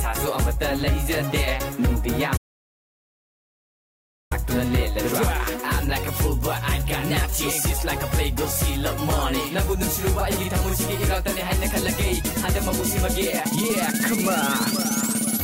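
At 2.38 s the sound cuts out abruptly into an audio dropout to silence lasting about 1.94 s, until 4.31 s. The gap is silent with no room tone, likely from the input being lost while recording continued, so that stretch of material is gone.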